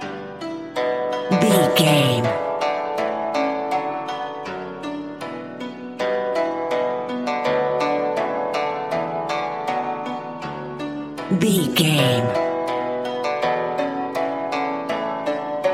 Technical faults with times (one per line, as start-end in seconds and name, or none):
none